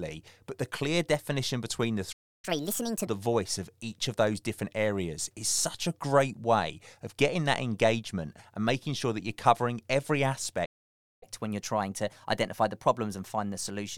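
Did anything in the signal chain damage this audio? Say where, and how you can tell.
Yes, at the playback stage. There are two playback stalls. The first runs from 2.12 to 2.45 s, about 310 ms, right after "clear definition between the". The second runs from 10.65 to 11.23 s, about 563 ms, after "that you're covering every". In both, the speech cuts off mid-flow and then resumes. On a waveform each gap is a flat line, and on a spectrogram it is an empty vertical band. The likely cause is the player's buffer running dry or its thread being blocked.

Each stall is followed by catch-up at higher speed, as the player resamples its backlog to regain the lost time. From 2.45 to 3.07 s, leading into "voice of each of", playback runs at 1.5x and pitch rises by roughly seven semitones, so it sounds hurried and chipmunk-like. From 11.23 s to the end, it runs at 1.1x and sits about a semitone and a half sharp. 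On a spectrogram, the harmonics in those stretches sit visibly higher and the syllables are squeezed closer together.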